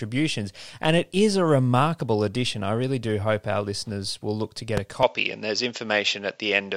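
A short speech clip with two faults. At 4.77 to 4.80 s, right after "will look to get", a single sharp loud pop cuts through, peaking well above the speech while the voice continues underneath. It is likely a brief voltage spike from a plug, switch, static discharge or driver glitch entering the signal path. From 5.03 s, just after "look to get a", to the end, the sound abruptly turns duller and boxier, with nothing above 7.6 kHz and a new faint noise floor roughly 45 dB below the speech. There is no gap at the change and the level stays the same. This points to an input switched to a poorer device, likely the system jumping mid-recording to a different microphone or a headset's call profile.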